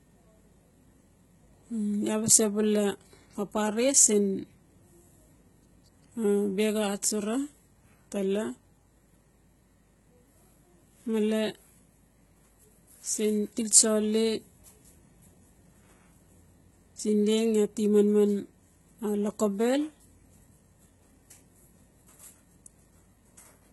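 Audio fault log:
Throughout: heavy HE-AAC compression, likely at a low bitrate near 16 kbps; rebuilt treble up to 11.8 kHz leaves speech sibilants gritty and metallic.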